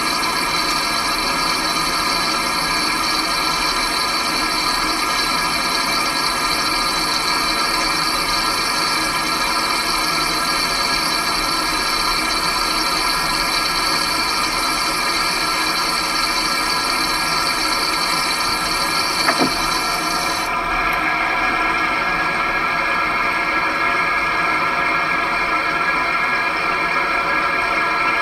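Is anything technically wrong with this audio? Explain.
No, nothing technically wrong can be heard here.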